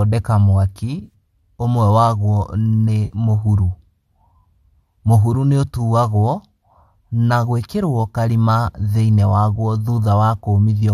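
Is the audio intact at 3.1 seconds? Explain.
No. Between 3.05 and 3.15 s there is an AAC frame loss with concealment: frames went missing, so the decoder refilled the gap from the last good spectrum with scrambled signs or interpolated energy, leaving a short smeared, noisy or phasey patch in the speech.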